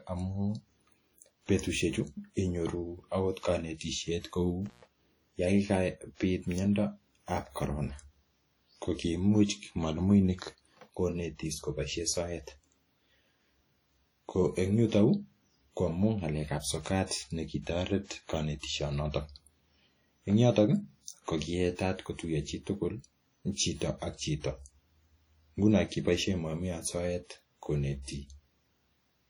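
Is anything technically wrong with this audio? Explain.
Yes, there are two faults. Throughout the speech, smeared, watery artefacts are audible. This is likely low-bitrate audio saved at a high bitrate: a roughly 32 kbit/s WMA source re-encoded as 256 kbit/s MP3 cannot recover what was lost. From 4.66 to 4.87 s there is an intermittent contact. A loose connection opens for about 127 ms, cutting the sound with crackle at each edge.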